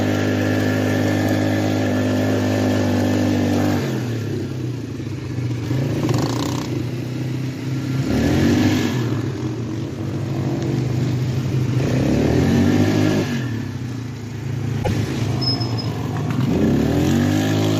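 From 8.1 to 13.2 s, a doubled audio track appears. A second copy trails roughly 150 ms behind, about 5 dB quieter, likely from a slower second capture path. At 14.80 to 14.91 s, damaged data in a compressed stream produces a brief glitch. The decoder loses sync there.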